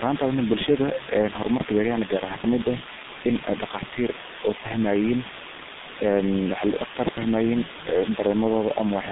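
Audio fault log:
Throughout, low bit depth with dither: the speech sits on a loud, constant, even hiss, roughly as strong as the speech itself. It sounds like a very coarse 4-bit signal. Dither was added before rounding, so the rounding error comes out as flat white noise and not as grainy distortion that follows the signal. You get a steady wash of noise sitting right on top of everything, but nothing crunchy or buzzy tracking the voice.
Throughout, G.723.1 codec: the speech is heavily mangled by this old low-rate telephony codec. It runs at about 6.3 kbit/s, which fits the G.723.1 high rate. The band is squeezed to roughly 150 Hz to 3.7 kHz, with nothing above 3.8 kHz, so the voice sounds muffled and boxy. The codec's voice model updates in coarse 30 ms steps, so the voice comes out hoarse and consonants smear together.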